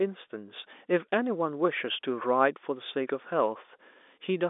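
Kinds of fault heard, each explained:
Listening to the speech carried over the telephone line, nothing stood out as a fault.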